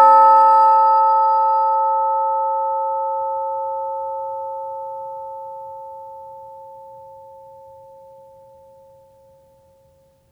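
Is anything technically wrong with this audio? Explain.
No, the music has no audible technical faults.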